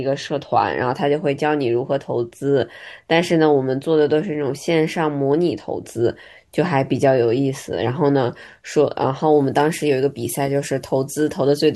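From 9.32 s to the end at 11.75 s, the speech has pre-emphasis left on. A treble boost matching the FM 50 µs curve was applied, but the complementary de-emphasis never was. The top end sits about 10 dB high at 10 kHz relative to 1 kHz, so the voice turns thin, bright and sharply sibilant.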